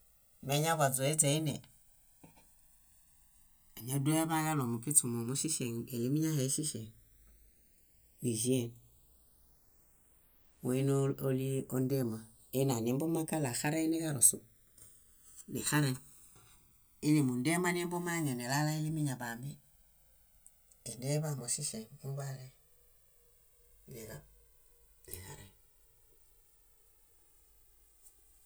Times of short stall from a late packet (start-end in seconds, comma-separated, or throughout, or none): none